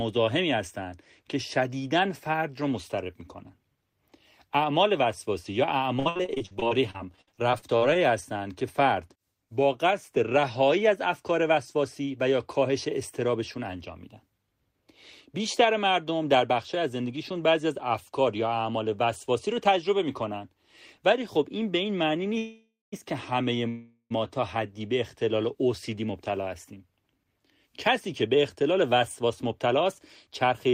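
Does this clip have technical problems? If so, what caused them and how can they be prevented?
Yes. Repeated packet loss (robotic sound), 5.99–7.97 s: twenty gaps, longest 59 ms, patched by extending prior sound, about 28% of the span. Prevent with FEC or a less congested link.

Jitter buffer slow-down, 7.75–8.43 s: pitch periods repeated, adding 49 ms, running at 94% speed. Prevent by keeping network delay steady.

Call audio freeze, 22.38–22.94 s and 23.68–24.12 s: sound holds, fades to brief silence, then resumes without loss, likely from delayed packets emptying the buffer. Prevent by reducing congestion upstream.

Jitter buffer speed-up, 27.18–30.69 s: about 200 ms trimmed in pitch-period slices, running at 105% speed. Prevent by avoiding burst arrivals after delays.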